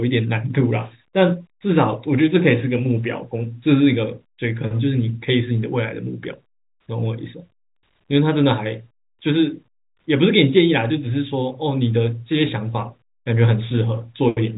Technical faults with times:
none

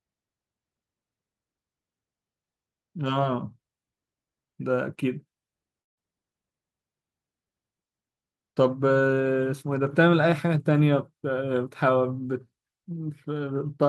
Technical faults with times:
5.81-5.98 long network dropout

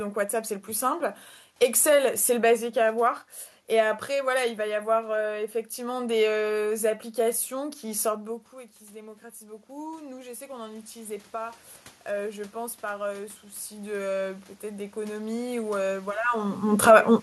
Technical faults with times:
7.53-16.21 automatic gain rising

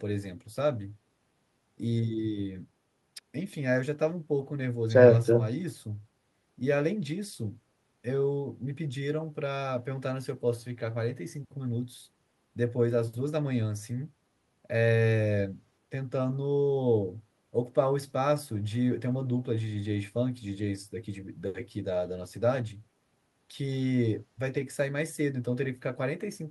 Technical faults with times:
none

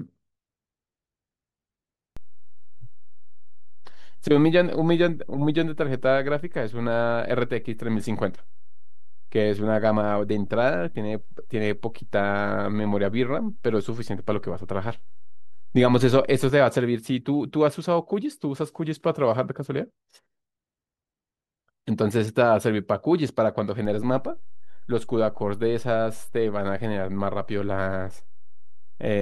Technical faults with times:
2.17-16.50 DC step
23.85-29.21 DC step

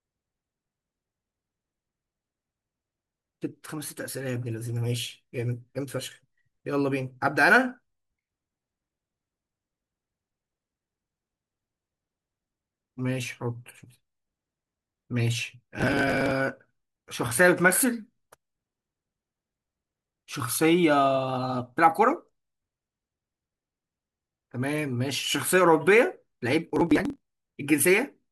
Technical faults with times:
15.80-16.31 processor overload crackle
26.70-27.20 processor overload crackle

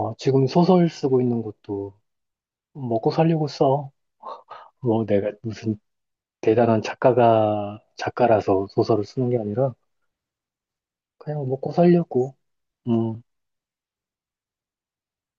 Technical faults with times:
none

